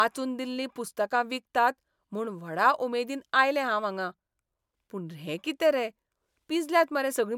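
Nothing goes wrong anywhere in this recording, so there aren't any technical faults to walk through here.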